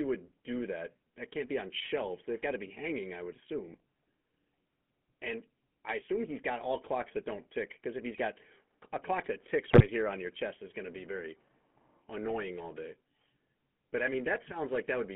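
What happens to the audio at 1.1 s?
The speech at 1.1 s carries the buzzy, gravelly roughness of the GSM full-rate codec, which runs through the whole clip. The codec rebuilds the voice from a vocal-tract model driven by a sparse, regular pulse excitation, which fits a 13 kbps stream, and the line passes only about 200 Hz to 3.4 kHz. Unlike a plain telephone band-limit, which only sounds thin and muffled, this adds a plainly audible grainy, rasping texture to the voice itself.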